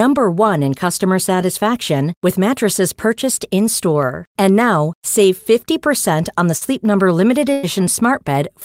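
At 4.03 s and again at 5.24 s, the stream likely skipped a handful of samples, well under a millisecond each, as dropped samples. The waveform jumps straight to a later value, so each spot gives a single sharp click with no sound lost.

At 6.57 to 6.63 s, short concealed packet loss: about 40 ms of the speech never arrived in time, and the decoder filled roughly 37 ms by extending the preceding sound before blending back. It comes across as a brief smear.

From 7.53 to 7.65 s, a burst of packet loss left about 100 ms missing. The receiver stretched the last sound across some 99 ms while fading it down, giving a held buzz or fading hiss before the speech picks up further along, with that stretch gone.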